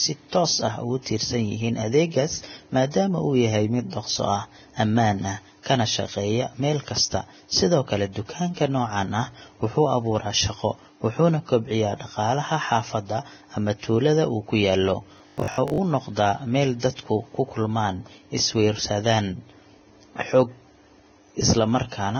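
Throughout, heavy low-bitrate coding, likely Vorbis compression, lowers the cut-off and quantises the remaining treble into grainy hiss, roughening tones and blurring attacks.

From 15.18 to 15.78 s, just after "tuulada uu ku yaallo", late audio was likely covered by looping a 20 ms buffer. About half of this stretch becomes a rigid, metallic 50 Hz buzz: robotic sound from repeated short buffers.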